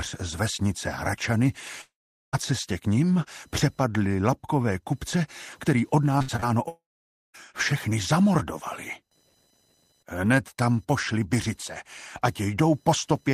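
Running under the whole clip there's a faint buzzy whine, computer activity noise, pulsing at roughly a kilohertz and sitting far below the sound. It comes from processor or peripheral load shifting the audio circuit's ground, so it tracks the machine, not the audio.

At 1.81 s the audio stops and stays gone until 2.35 s. A brief smeared buzz trails off and then there's silence for about 0.42 s. It's likely a long network dropout, with about half a second simply lost when the sound resumes.

From 6.19 to 6.44 s it turns choppy. That's repeated packet loss: several quick holes, the longest about 63 ms, each patched by stretching the previous sound, so nearly half that span is filler.

Right after, at 6.68 s, it cuts out again until 7.36 s. There's a short fading tail, then roughly 0.53 s of silence. This is likely another long network dropout, and about 0.66 s of audio never comes back.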